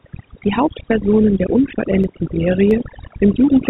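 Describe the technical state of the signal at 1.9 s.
Speech sits over a reduced background with twinkling specks: overdone noise removal, present throughout, has pulled frequency bands near its noise estimate down along with quiet speech detail.

At 1.9 s the signal also lies within a run of regular clicks from 0.69 to 3.38 s, repeating every 0.67 s. These are likely clock drift buffer slips, with a few samples dropped or repeated as mismatched device clocks drift apart.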